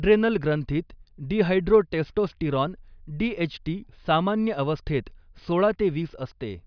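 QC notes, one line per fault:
Nothing to flag on this speech recording; I listened all the way through and found nothing worth noting.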